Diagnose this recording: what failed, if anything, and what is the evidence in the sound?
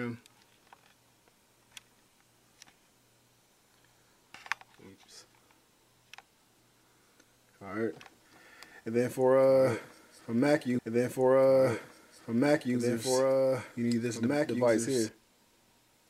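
From 8.01 to 15.09 s there's a doubled audio track: a dry, full-band copy about 5 dB down, trailing by about two seconds, likely a second slower capture path at the driver stage.

A stream segment repeated at playback: at 10.78 s there's a small blip as the player jumps back, then about 2 s of programme plays again until 12.77 s, so the same segment was queued twice.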